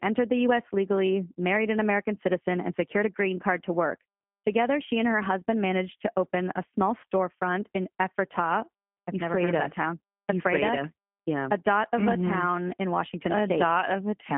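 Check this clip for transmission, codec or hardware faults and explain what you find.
One codec fault runs through the whole speech recording: G.729 coding damage, plainly audible from start to finish.

G.729 codec, throughout: the sound is rebuilt from a vocal tract filter, a pitch predictor and a few pulses per 10 ms frame, so it comes out rough and slightly synthetic. The roughness points to an 8 kbit/s G.729A-type coder. A spectrogram shows a telephone band of roughly 150 Hz to 3.4 kHz, with nothing above 3.5 kHz.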